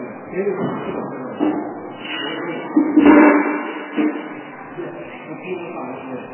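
MP3 compression runs throughout the clip, with nothing above 3 kHz and a heavily watery, swirling texture. The likely cause is an encoder starved of bits, which fits roughly 8 kbps, cutting the treble and letting weak frequency lines flicker between frames.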